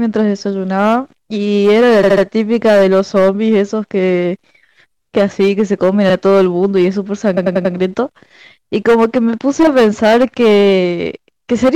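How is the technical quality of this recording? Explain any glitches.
The recording has two technical problems: constant harsh distortion and three stutters.

Hard clipping runs through the whole speech clip: loud moments carry a gritty fuzz because peaks are overdriven by about 10 dB and cut flat, adding high harmonics, on roughly 7 percent of samples.

Repeated frames cause stutters at 2.02–2.23 s, 6.09–6.13 s and 7.36–7.73 s. A short block of compressed audio replays. The blocks are about 70 ms, 46 ms and 93 ms, looping three times, once and four times, which adds 0.21 s, 0.05 s and 0.37 s.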